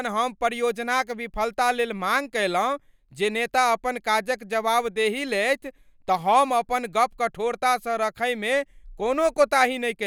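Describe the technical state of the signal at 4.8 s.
At 4.8 s the speech signal is intact, with no audible fault at that moment.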